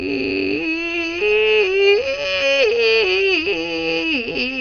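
Music with MP2 compression damage throughout: nothing survives above 6.5 kHz, so the sound is dull, bands flicker on and off, and the remaining sub-bands gurgle from coarse quantisation. This is likely MPEG Layer II encoding starved of bits, which fits a rate near 48 kbps.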